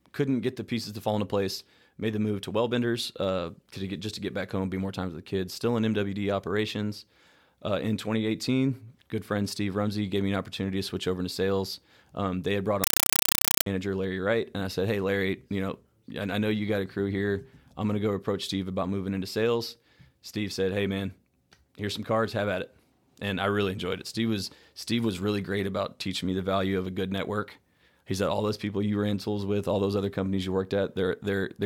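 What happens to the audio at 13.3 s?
Right after "they had brought", from 12.84 s to 13.66 s, the speech gives way to very loud, chattering static, a harsh buzz pulsing about 31 times a second. This is a compressed stream played as audio. An undecoded Dolby Digital bitstream, which fits a 256 kbps AC-3 stream, was treated as ordinary samples. Each frame plays as a roughly 5 ms burst of noise followed by silent zero padding.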